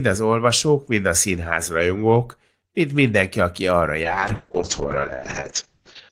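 At 4.05 s, after "mind mindenki aki arra", a call bitrate drop from 32 to 6 kbps narrows bandwidth to 8 kHz, leaving the speech muffled and rough.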